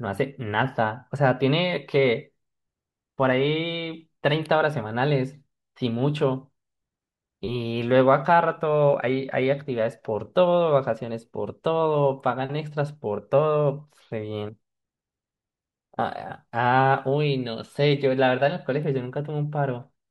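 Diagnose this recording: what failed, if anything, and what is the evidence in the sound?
No fault found in this recording.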